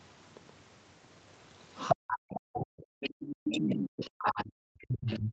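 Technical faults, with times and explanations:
Throughout: doubled audio track. A second full-band copy of the speech trails the first by roughly 150 ms, about 5 dB quieter. It carries no room colour or decay, so it sounds like a hard slapback. The likely cause is a second, slower capture path.
1.91–3.03 s and 3.32–5.32 s: speech suppressed in double talk. The talker's speech dips sharply, by up to about 40 dB, losing about a second in the first stretch. Both sides were probably talking, so the echo canceller likely turned everything down.
3.02–3.33 s: other side's voice leaking through. A second voice comes through briefly, about 10 dB below the main speech. It likely came from the loudspeaker, and the echo canceller failed to remove it.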